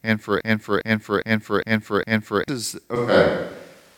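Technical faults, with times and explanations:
0.41–2.48 s, broken-record loop: Right after "and for", a 0.41 s fragment of speech plays five times back to back with identical timing and content, so the sound stutters mechanically instead of continuing. This is likely a stall in the player, encoder or stream, which kept resending the last fragment it held in place of new audio. The speech that should have filled those two seconds is missing, and the clip resumes past the gap.
2.96 s to end, switch to a distant microphone: The voice abruptly turns roomy and hollow, with thinner low end and audible room reflections, and stays that way to the end. The overall level remains roughly the same, and a background of room noise sits well under the speech, roughly 35 dB down. The likely cause is that the close microphone's signal dropped out and a microphone farther from the talker took over, picking up more of the room.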